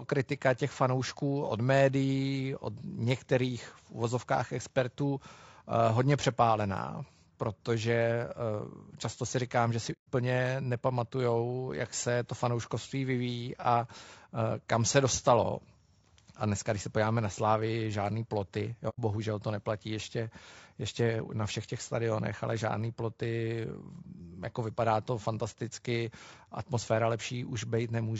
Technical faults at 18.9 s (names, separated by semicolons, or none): low-delay AAC compression; AAC frame loss with muting